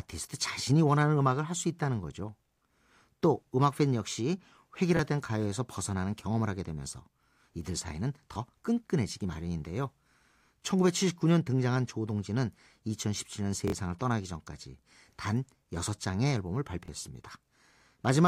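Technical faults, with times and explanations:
4.97–4.99 s, 8.34–8.36 s, 16.86–16.88 s: repeated buffer. A 23 ms slice of the speech plays twice with a hard join, heard as a quick click-like stutter, and about 20 ms of the speech that should follow is lost. The slice length fits a 1024-sample buffer, which the device replayed because new audio arrived too late.
13.68–13.72 s: repeated buffer. The same 23 ms slice sounds three times in a row, a longer buzzy stutter, and about 50 ms of speech is skipped.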